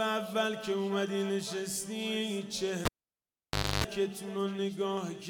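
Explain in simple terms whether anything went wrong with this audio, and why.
Cable pulled and plugged in, 2.85 to 3.84 s: a pop, about 0.94 s of near silence, including 0.28 s of 50 Hz mains buzz before it reconnects with another pop.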